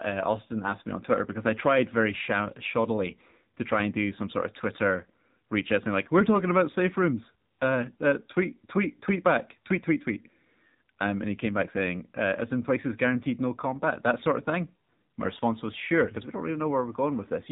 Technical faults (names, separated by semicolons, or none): AMR narrowband mobile codec